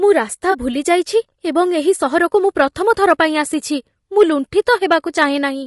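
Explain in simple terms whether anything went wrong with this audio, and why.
A few things went wrong here, and you can hear each one.

The whole recording has a rough, grainy edge on the voice, with a hissy texture between the tones and a top end that sounds thin and a bit artificial. That's the signature of low-delay AAC compression, the kind video-call apps use, and it's most likely the cause. To keep the delay tiny, that codec chops the sound into very short slices, which makes it hard to capture the fine pitch detail of a voice. With only a modest amount of data to spend, the voice comes out coarse and fuzzy.

Right near the start, from about 0.51 to 0.55 s, there's a brief smeared, slightly noisy blip. That's AAC frame loss with concealment. A small chunk of the compressed audio never arrived, so the decoder papered over the gap with a guess built from the sound just before it. The patch is short enough that it smears rather than dropping out.

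Then there's hard clipping, once from 2.6 to 3.21 s and again briefly around 4.21 to 4.23 s. The voice got slightly louder than some stage in the chain could handle, so the tops of the loudest peaks were sliced off flat. Those flattened peaks add a crackly, gritty edge on the loud moments. The overload is small, so it comes across as a crunch on the peaks rather than constant fuzz.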